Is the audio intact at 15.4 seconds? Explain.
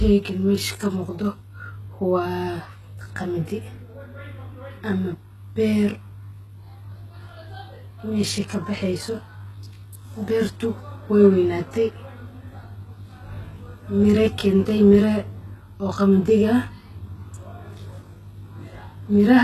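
No. At 15.4 seconds, as throughout the clip, the sound is combed by a channel delay. One channel lags the other by roughly 20 ms, and when the two are summed to mono the shared content cancels at regularly spaced frequencies, starting near 30 Hz. The result is rough and slightly doubled. A spectrogram shows fixed horizontal notch stripes at even spacing that do not move as the sound changes.

The same moment also carries heavy codec damage, likely from HE-AAC compression at a very low rate, around 16 kbps. The treble is not the original but is rebuilt by copying lower bands upward under a coarse envelope. S sounds turn gritty and metallic. A spectrogram shows a hard ceiling with nothing above 12.3 kHz, and upper bands that look like smeared, repeated copies of the lower ones whose harmonics fail to line up.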